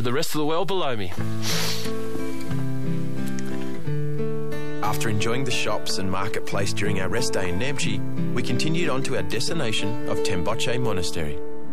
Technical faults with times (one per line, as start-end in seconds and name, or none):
0.00-11.73 DC offset